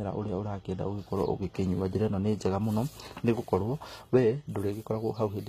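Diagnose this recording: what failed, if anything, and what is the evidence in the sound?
The codec stage is at fault throughout. The treble of the speech stays bright but sounds synthetic, with sibilants coming out gritty and metallic, and nothing above 14.9 kHz. This is likely HE-AAC compression at a very low bitrate near 20 kbps. Spectral band replication rebuilds the upper band from copied lower bands, so its harmonics don't align. A plain low-pass would sound dull instead.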